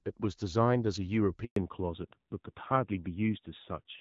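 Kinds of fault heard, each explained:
Handover gap: the call switched networks with no frames arriving, so sound dies within tens of milliseconds into a clean 120 ms silence at 1.44 s, not a concealed dropout.
Fallback to narrowband: from 1.56 s onward nothing above 4 kHz remains and the sound turns duller and rougher, a lasting codec downgrade rather than a momentary glitch.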